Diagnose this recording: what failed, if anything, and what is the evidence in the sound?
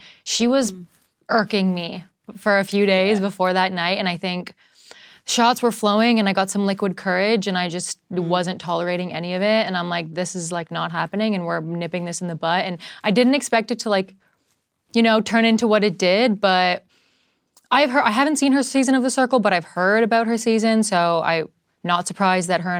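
Nothing in this speech recording points to a failure at any stage of the chain, so there's no fault to diagnose here.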